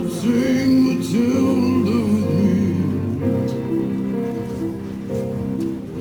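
Throughout the clip there is sample clock jitter: the converter's timing wanders by around ten microseconds, so steep waveform slopes are sampled at the wrong moments. The resulting roughness sits about 30 dB below the signal, swelling on loud, bright passages and disappearing in silence, unlike a steady noise floor.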